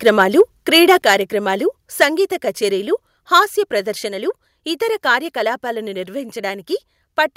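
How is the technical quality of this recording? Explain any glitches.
The quality is marred by harsh distortion and one abrupt level drop. From 0.06 to 0.42 s, 0.74 to 1.13 s and 3.35 to 3.38 s, the loudest speech crackles. The likely cause is microphone overload: peaks exceed the converter's ceiling by about 2 to 3 dB, flattening a small fraction of samples.

At 1.02 s, speech and background fall together by about 5 dB. This is likely the microphone volume stepped down by software reacting to the clipped peak.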